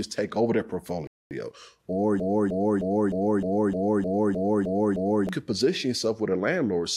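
At 1.07 s, right after "take over their", a rebuffering stall cuts the speech to silence until 1.31 s. The player ran out of downloaded audio and waited for more, adding about 238 ms. Unlike a dropout, speech resumes exactly where it stopped, with nothing missing.

From 2.20 s to 5.29 s, a broken-record loop repeats one 307 ms fragment ten times back to back. The likely cause is a stalled stream that kept resending the last piece it held. Unlike the stall, the speech that should have played there is lost.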